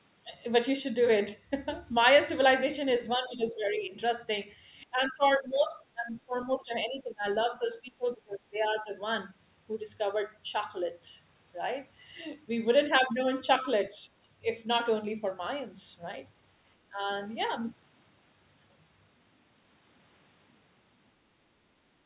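Speech, heard through a narrowband call path with nothing above 4 kHz, dips in level at 3.0–3.96 s, 4.85–7.25 s, 7.49–8.92 s, 13.91–14.1 s and 16.9–17.09 s. The dips reach about 25 dB at their deepest, around 7.5–8.9 s, and the cause is likely speech suppressed in double talk by an echo canceller. Unlike packet-loss dropouts, the sound is turned down rather than replaced with clicks or robotic repeats.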